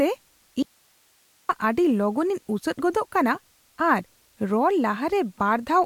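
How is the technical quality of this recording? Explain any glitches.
The recording has one clear glitch, an audio dropout to a faint residue, from 0.63 to 1.49 s. The wanted signal likely stopped reaching the path while the downstream chain stayed live, so the speech cuts out abruptly for about 0.87 s and leaves only hiss, roughly 40 dB below the speech, before the speech snaps back.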